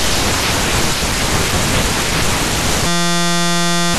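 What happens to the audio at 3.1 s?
At 3.1 s the speech is caught in a system hang loop, running from 2.87 to 3.94 s. The driver stalled while the hardware replayed one 5.8 ms chunk, which fits a 256-sample buffer. It sounds like a steady 172 Hz buzz. The waveform shows identical repeating cycles, and the spectrogram shows a flat comb of harmonics spaced 172 Hz apart.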